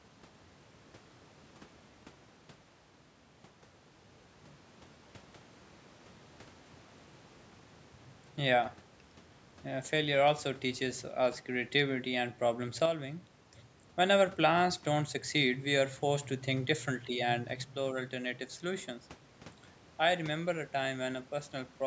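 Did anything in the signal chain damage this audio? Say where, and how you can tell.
Yes. One channel drops out, likely from a loose stereo connection in the analogue wiring. From 12.86 to 13.44 s, and again from 17.62 s to the end, the speech abruptly falls about 6 dB as the mono sum loses half its shared signal.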